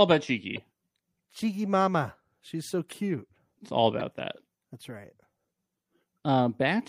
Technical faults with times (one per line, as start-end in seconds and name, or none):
0.00-6.88 MP3 compression
0.52-0.61 corrupt frame decoded
2.90-2.95 corrupt frame decoded
3.99-4.02 corrupt frame decoded